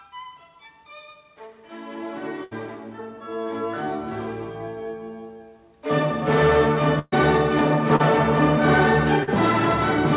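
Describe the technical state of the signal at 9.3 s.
At 9.23 to 9.30 s there is short concealed packet loss: about 40 ms of audio failed to reach the decoder in time, and the receiver patched the gap by extending the preceding sound, carrying on its pitch or shaped noise, before crossfading back into the real signal. The result is a brief smeared, wobbling blip where the original detail is gone, heard through the call path's narrow band with nothing above 4 kHz.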